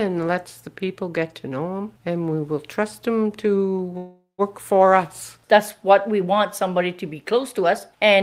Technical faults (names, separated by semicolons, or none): call audio freeze